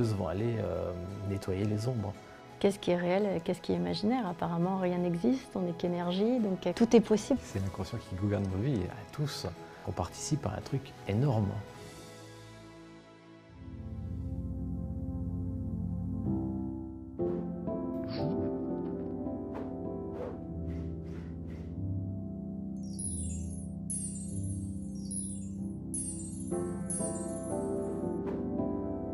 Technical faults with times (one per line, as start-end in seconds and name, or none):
9.80-9.84 Bluetooth stutter